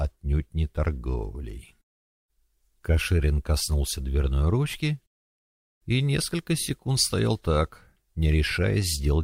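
No technical faults can be heard anywhere in the audio. There is nothing here to place on the timeline.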